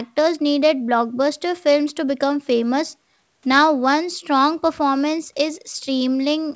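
Nothing stood out on listening to this speech recording.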